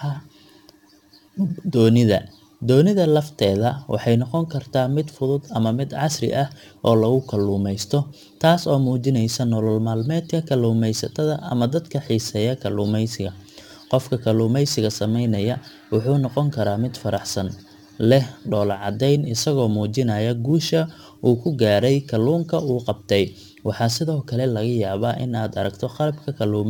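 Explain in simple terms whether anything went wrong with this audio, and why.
Sample clock jitter runs through the whole speech clip. The converter's timing wobbles by a few millionths of a second, so each sample lands slightly off. That adds a faint hiss or grit, strongest on loud and sharp sounds and gone in the pauses.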